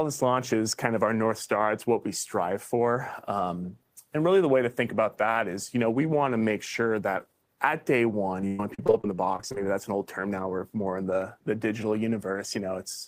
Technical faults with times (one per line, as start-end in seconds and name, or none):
8.41-9.57 repeated packet loss (robotic sound)